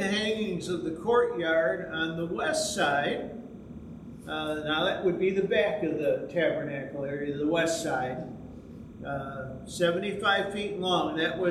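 Linear timecode running at 30 frames per second is leaking from a neighbouring track or cable, adding a faint chirping warble between roughly 1 and 2 kHz, about 40 dB down, throughout the audio.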